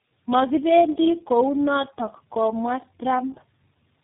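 Throughout, speech sounds rough, muffled and warbly, empty above 3.7 kHz: tandem speech coding, three speech codecs in a row, each re-coding the previous one's damage.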